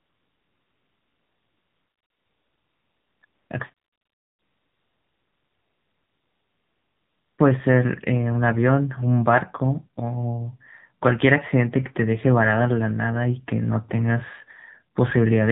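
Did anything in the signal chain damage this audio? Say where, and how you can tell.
Yes. The codec stage is the culprit throughout: the whole clip has passed through the AMR narrowband mobile codec. Sampling at 8 kHz removes everything above 4 kHz, so the speech sounds boxed-in and dull. The pulse-driven vocal-tract model works on a very small bit budget here, which fits one of AMR-NB's lower modes, around 7.4 kbps. That starved excitation makes the voice plainly buzzy and synthetic rather than natural.

The second fault comes from discontinuous transmission in the same call path, heard as AMR comfort noise. The sender classed the talker as silent and stopped sending speech frames, so the receiver filled the gaps with generated noise built from a coarse level-and-spectrum description. This happens from 0.00 to 3.2 s, again for 240 ms at 3.26 to 3.50 s, and from 3.74 to 7.38 s, about 3.6 s. 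In those spans the real background gives way to a steady, smooth hiss that switches in and out at the boundaries.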